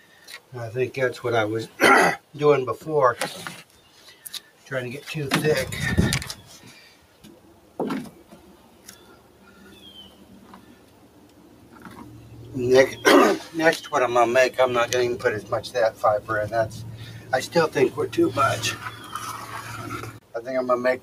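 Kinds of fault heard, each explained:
Noise suppressor applied to music or sounds: Present throughout the clip. A suppressor tuned for speech stays engaged and keeps judging sustained, steady content as background noise, so it pulls the gain down on it while letting sharper onsets pass. The result is a level that keeps swinging by roughly 10 dB as the processor changes its mind, which gives the sound an audible pumping, fluttering quality and a thinned-out body.
Sound cut by the noise suppressor: Heard at 0.00–0.52 s, 3.64–4.66 s, 6.76–7.79 s, 8.15–9.81 s, 10.08–11.99 s and 20.11–20.34 s. In these stretches the suppressor treats the sound itself as noise and attenuates it harder than the surrounding material, with the deepest dips reaching about 7 dB. Held and decaying portions sink and their tails are truncated, while abrupt parts survive more intact.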